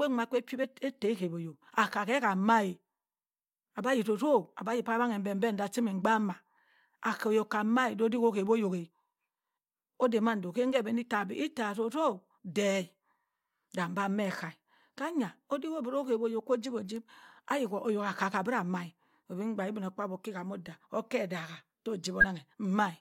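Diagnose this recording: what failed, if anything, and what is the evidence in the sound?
At the codec decoding stage, compressed frames were skipped: near 0.63–0.65 s and 22.20–22.24 s the speech jumps ahead by about 20 ms. Each join is a brief discontinuity where the audio resumes further on. A spectrogram shows a brief vertical line and a discontinuity in the harmonic tracks.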